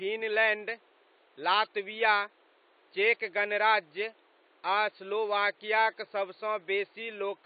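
AAC compression runs throughout the speech, with dull, smeared highs and fizzy sibilants, likely from AAC-LC starving the spectrum at a rate that fits 32 kbps.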